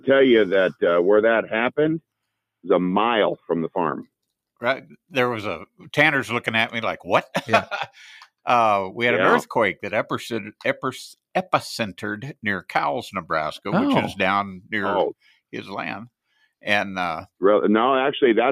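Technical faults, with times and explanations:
No technical faults are audible anywhere in the audio.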